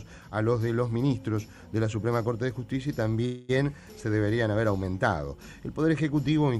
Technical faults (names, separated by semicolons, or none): call audio freeze